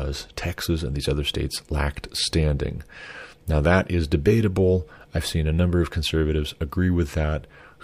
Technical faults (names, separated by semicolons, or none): none